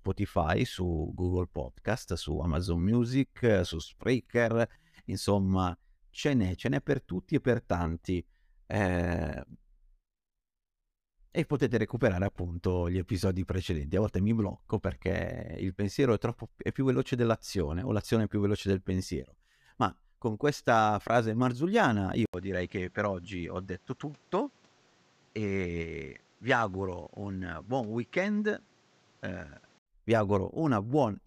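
At 22.26 s, right after "con questa frase marzulliana", the speech drops out for 80 ms and returns duller and boxier, with nothing above 8.2 kHz, a few decibels quieter, and with a new background hiss sitting roughly 35 dB under the speech. The likely cause is the input switched to a poorer device, a narrower-band microphone with its own tone and noise. At 29.86 s the original brighter, cleaner sound returns.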